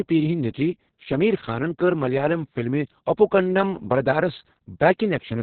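Throughout, Opus voice compression starved of bits, fitting about 6 kbps, cuts everything above 4.3 kHz and codes coarsely, leaving the speech muffled, hoarse and robotic.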